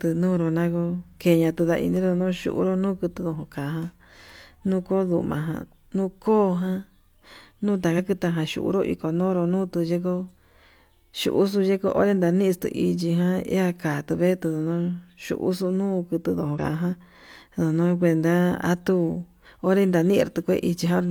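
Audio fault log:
7.94–8.00 s and 16.54–16.58 s, damaged data in a compressed stream: two short glitches, about 58 ms and 46 ms long, break into the speech as brief chirps or blips. Part of the encoded data at each point was corrupted, so the decoder misread or rejected those frames and lost sync. It produced garbled output until it found the next valid frame header and locked back on, which is why each disruption is so short and abrupt.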